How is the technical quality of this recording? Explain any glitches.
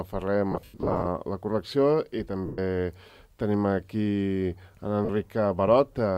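The recording has audible dropouts from lost LE Audio frames, at 0.52 to 1.06 s, 2.46 to 2.59 s, and about 5.05 s. The first is about 340 ms of gaps scattered over 540 ms, with the longest stretch around a tenth of a second; the others are 120 ms and 40 ms. The LC3 decoder fills missing frames by repeating the last spectrum with randomised signs, so tones blur into a noisy smear that fades toward silence the longer a gap lasts. The light lossy compression stays in the background.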